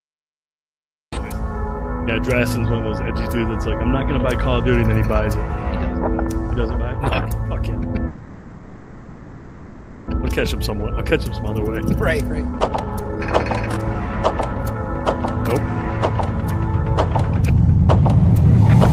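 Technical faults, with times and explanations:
0.00 to 1.13 s, cut-off start: the clip opens on digital silence and the sound enters abruptly at 1.13 s, already in progress, with no attack or fade-in. Capture or streaming began late, so the opening of that sound was never recorded.
8.07 to 10.09 s, call audio freeze: the last sound is held and decays as a buzzy, fading tail for about 2 s. The audio then resumes exactly where it stopped, with nothing skipped. The likely cause is delayed packets emptying the jitter buffer, which adds 2 s of delay.
10.18 to 11.83 s, 12.28 to 14.89 s, 15.59 to 16.72 s and 17.33 to 18.69 s, jitter buffer speed-up: playback runs fast at unchanged pitch, at 107%, 124%, 107% and 112%. The receiver trims pitch-period-sized slices, roughly 0.1, 0.7, 0.1 and 0.15 s in total, to work off the built-up delay. This makes the audio sound hurried.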